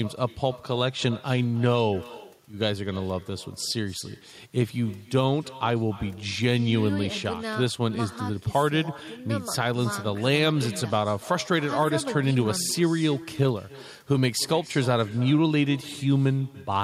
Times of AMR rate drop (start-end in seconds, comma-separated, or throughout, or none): none